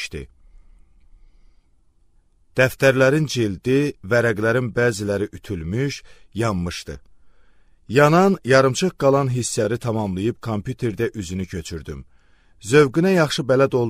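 The audio has compressed frames skipped at 6.95 s and 9.64 s, jumping ahead roughly one 26.1 ms frame, then around 100 ms.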